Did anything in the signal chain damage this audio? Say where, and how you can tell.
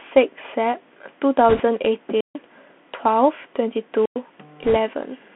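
Yes. The codec stage is the main culprit: the speech passed through a Bluetooth CVSD headset codec, the one-bit delta modulator used on narrowband headset links at 64 kbps. Each bit only tells the decoder to step up or down, and the audio is confined to a telephone band of about 200 to 3400 Hz. Sibilants come out scratchy where loud high-frequency energy outruns the adaptive step, and a grainy hiss sits under the voice for the whole clip.

The radio link also shows bit errors on the Bluetooth voice link, from 1.49 to 1.63 s and again from 4.64 to 4.77 s. Because every CVSD bit carries the same small weight and the decoder's errors fade away, flipped bits don't produce sharp clicks. Instead each burst adds a rushing, crackly noise over the speech. The first burst is the rougher of the two, which fits an error rate of around one bit in twenty against roughly one in thirty for the second.

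Separately, on the analogue FM wireless microphone, there are two wireless microphone squelch dropouts, at 2.14 to 2.40 s and 3.95 to 4.22 s. The RF signal faded far enough that the receiver's squelch closed and muted its output. Each event begins with a swell of hiss, drops into near silence (147 ms in the first and 104 ms in the second), and then the speech returns.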